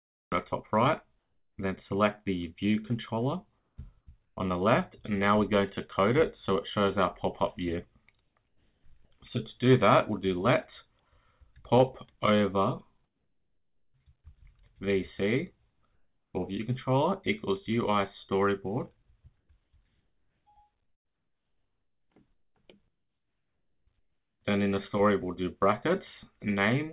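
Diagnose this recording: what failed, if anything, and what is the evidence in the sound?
The cut-off start is a capture or storage fault. The file opens at 0.0 s in the middle of a sound, with no attack and no fade-in. Digital silence gives way abruptly at about 0.32 s. Recording or streaming began late, so the opening of that event was never captured. The sound starts already under way, with a hard edge where a natural onset should be.

The second fault is comfort noise in place of the background. Eight pauses lose their real room sound: 1.19–1.58 s, 3.59–4.37 s, 8.21–8.84 s, 13.04–13.94 s, 15.71–16.34 s, 19.4–19.73 s, 20.84–22.1 s and 22.88–23.87 s. In each, the detailed background turns into a flat, steady hiss. The real background sits about 53 to 55 dB below the loudest material. The level dips too: about 2 dB at 1.19 s, about 4 dB at 13.04 s, and about 6 dB in the last two gaps. 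The likely cause is discontinuous transmission in call processing. The sender stops sending during pauses, and the receiver fills them with synthetic noise. The whole clip is band-limited with nothing above 4 kHz, which fits a 64 kbps G.711 mu-law call path.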